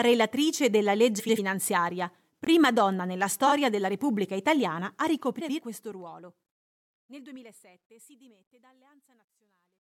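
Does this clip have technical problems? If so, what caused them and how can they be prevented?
Yes. Four garbled, fluttering bursts, at 1.19–1.39, 3.46–3.52, 5.39–5.60 and 7.80–7.85 s, are frames out of order: adjacent blocks of 92.9 ms (first and third) and 23.2 ms (second and fourth) were swapped before decoding. Prevention: use sequence numbers and a reordering jitter buffer so frames are decoded in their original order.

Two brief hard-edged holes in the speech, at 2.45–2.47 and 6.47–6.49 s, each 21.33 ms long and 4.0 s apart, are gaps between chunks, likely from codec padding or late playback at each chunk boundary. Prevention: trim encoder padding and schedule chunks gaplessly so each begins exactly where the previous one ends.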